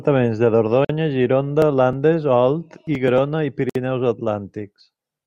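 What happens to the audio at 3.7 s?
At 3.70 s the speech drops into a gap at a join of encoded pieces: about 59 ms of silence until 3.75 s, left by untrimmed encoder delay and padding, then it resumes where it stopped.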